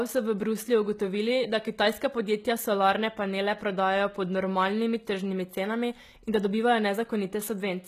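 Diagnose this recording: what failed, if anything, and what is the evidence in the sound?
The codec stage is at fault: the speech was likely passed through HE-AAC compression, and the sound fits HE-AAC v2 at a low bitrate of about 20 kbps. Throughout the clip the damage is plainly audible. Nothing remains above 14.9 kHz, and the treble below that sounds synthetic rather than recorded. The encoder kept only the lower spectrum and rebuilt the upper bands by copying lower content upward under a coarse envelope, so s sounds come out gritty, lispy or metallic.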